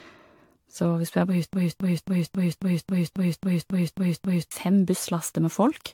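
From the first moment the speech sounds swirly, hollow and smeared, with consonant onsets blurred beyond what a 96 kbit/s AAC stream would explain on its own. That points to generation loss, the likely result of the audio being decoded and re-encoded around seven times, each pass quantising on a shifted frame grid so the damage compounds. On a spectrogram the upper bands look patchy and mottled, with holes that come and go, and nothing above about 19.4 kHz.

Right after "hvis du er på", at 1.53 s, a broken-record loop begins. A fragment of about 271 ms repeats exactly, back to back, eleven times until 4.51 s, and the speech that should have filled those three seconds is gone. The likely cause is a stalled player, encoder or stream that kept resending the last chunk it held. The waveform shows one identical shape tiled end to end, and the spectrogram shows the same block copied at regular 271 ms intervals.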